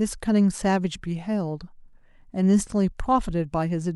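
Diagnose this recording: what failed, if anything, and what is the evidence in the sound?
Nothing in this recording gives any sign of a failure at any stage, so there's nothing here to diagnose.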